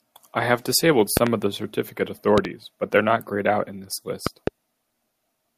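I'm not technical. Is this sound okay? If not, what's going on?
No. The speech is interrupted three times by a loud pop, a sharp double click that jumps out well above the voice: at about 1.17 to 1.29 seconds, 2.38 to 2.47 seconds, and 4.27 to 4.50 seconds. The talking carries on underneath each one. The likely cause is a sudden electrical jolt entering the recording, such as a cable being plugged in, a switch, static, or a brief hiccup in the audio hardware.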